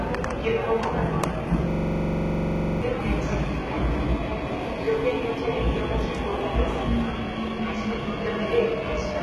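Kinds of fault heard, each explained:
HE-AAC compression: The treble sounds synthetic rather than recorded. Nothing reaches above 11.7 kHz. The upper band is bright but gritty and metallic, with harmonics that fail to line up with the lower range. The likely cause is heavy HE-AAC coding at a very low bitrate, which fits about 16 kbps. That codec keeps the lower spectrum and rebuilds the top by copying lower bands upward under a coarse envelope. The damage runs through the whole clip.
System hang loop: From 1.71 to 2.82 s, one 42.67 ms slice of sound repeats exactly, 26 times. This happens when the computer or driver stalls while the sound hardware keeps replaying its ring buffer. The slice length fits a 2048-sample buffer. At 23.4 repeats per second, it comes across as a rapid, rattling stutter. About a second of the real audio is lost underneath it.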